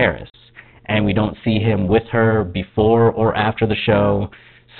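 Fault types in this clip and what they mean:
overlap-add ripple: frames rejoined with an overlap whose gains don't sum evenly, so level swings by about 11 dB near 300 Hz throughout, a metallic buzz with extra tones around each note.
packet loss filled with silence: at 0.30 s a 40 ms hole, consistent with two lost packets, is replaced by silence with hard edges in the speech.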